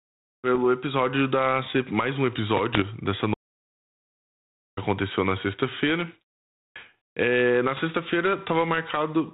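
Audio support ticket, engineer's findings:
Bit errors on an ADPCM link, 0.55–0.61 s (just before "episódio da"), 2.75–2.85 s, 7.77–7.80 s. Pops and rough bursts with brief level jumps. Flipped bits derail the decoder's step size and predictor, so each hit rings on briefly. Error rate a few tenths of a percent.

Audio dropout to silence, 3.34–4.77 s, about 1.43 s lost, resumes on "aconteceu na". Gap is silent, no room tone. Likely cause: input lost upstream while the encoder kept writing silence. Content in the gap unrecoverable.

The G.726 ADPCM path underneath runs at 32 kbit/s, with its 4 kHz band limit.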